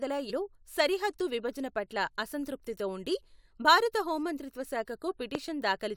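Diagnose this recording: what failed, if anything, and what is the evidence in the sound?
Damaged data in a compressed stream at 0.29 to 0.31 s, just before "సరిహద్దు విభజన పట్ల అసంతృప్తితో", is a codec-stage failure. Corrupted bytes made the decoder misread a frame, lose sync and hunt for the next valid header, leaving a brief glitch in the speech.

A loud pop at 5.35 to 5.37 s sits on top of the speech, which continues underneath. It is a single sharp pulse peaking roughly 15 dB above the signal, most likely from an electrical step in the analogue wiring, such as a plug or switch, shaped by the circuitry downstream.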